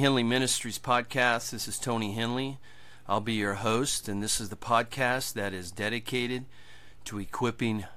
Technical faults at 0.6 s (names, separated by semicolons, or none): wireless microphone noise hit